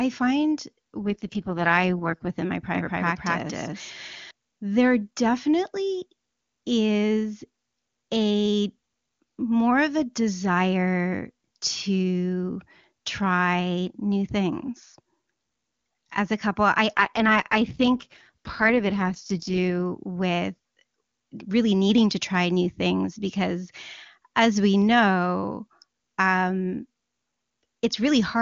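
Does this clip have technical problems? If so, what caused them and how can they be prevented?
Yes. There are two AMR rate drops, from 1.02 to 2.30 s and from 16.97 to 19.81 s. In both, the speech turns rough and synthetic without any gap or loss of bandwidth. That fits the network forcing AMR-WB down from 23.85 kbit/s to its lowest rate, about 6.6 kbit/s, to protect a weak radio link. Better coverage or a more robust connection prevents this.

A doubled audio track runs from 2.75 to 4.31 s. A second full-band copy, roughly as loud as the original, trails it by about 200 ms. It has no room colour, and it starts and stops abruptly. It is likely a duplicate capture path or an edit that left two overlapping copies. Routing audio through a single capture path and checking edits for duplicate layers prevents it.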